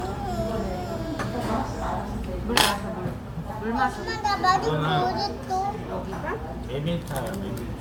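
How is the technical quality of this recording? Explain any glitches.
The technical quality is compromised throughout the recording by generation loss. Across the whole clip the audio sounds swirly, smeared and hollow, with blurred attacks, more degraded than a single MP3 encode at what seems to be around 128 kbit/s would leave. The likely cause is repeated MP3 decoding and re-encoding, perhaps seven or so passes, each quantising on a shifted frame grid so the noise and spectral holes pile up.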